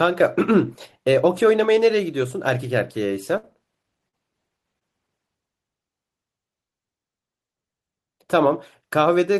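At 3.37 s a burst of packet loss drops about 60 ms of speech; the receiver stretches the last sound for roughly 54 ms, fading it, before audio resumes.

Short concealed packet loss follows at 4.09 s and 4.79 s: 40 ms and 20 ms holes are patched by extrapolation, heard as brief smears.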